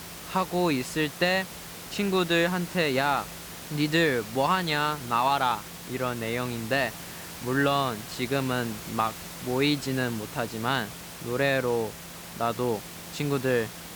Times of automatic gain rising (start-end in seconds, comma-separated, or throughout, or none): none